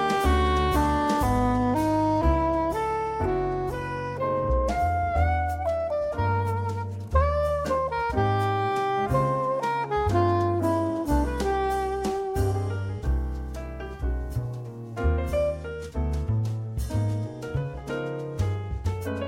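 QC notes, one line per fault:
No faults heard; nothing to log for this clip.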